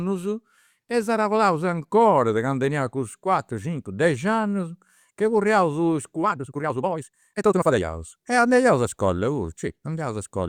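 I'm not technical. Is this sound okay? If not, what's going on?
No, there's a time-stretched section from about 6.21 to 7.85 s: the speech suddenly rushes along at nearly double pace, same pitch, likely from software squeezing it to fit.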